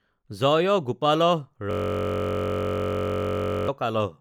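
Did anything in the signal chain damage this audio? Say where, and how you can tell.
Yes. A system hang loop at the driver or buffer stage runs from 1.71 to 3.68 s. One 21.33 ms slice of speech repeats about ninety times, giving a steady 46.9 Hz buzz that fits a 1024-sample ring buffer. Spectrograms show identical periodic stripes; waveforms repeat exactly.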